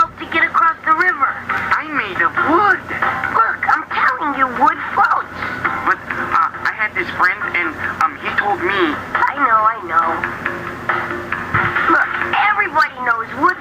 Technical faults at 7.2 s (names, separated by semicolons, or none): gain pumping